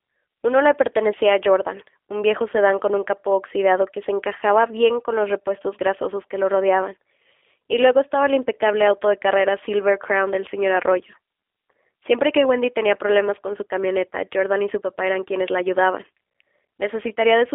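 Throughout, G.729 codec damage is plainly audible: the speech, rebuilt from a filter and sparse pulses, sounds rough and synthetic, fitting an 8 kbit/s link. A spectrogram shows a band from 300 Hz to 3.5 kHz, with nothing above 3.7 kHz.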